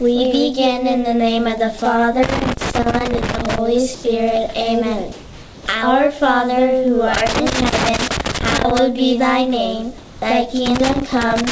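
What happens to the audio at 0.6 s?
Nothing goes wrong at 0.6 s: the audio is intact, carried through the WebRTC call path with the band-limited sound of a wideband call codec, with nothing above 8 kHz.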